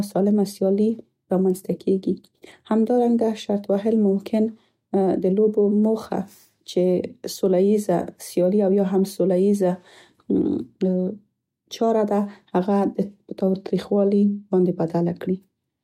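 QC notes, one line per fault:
Nothing stood out on listening to this speech recording.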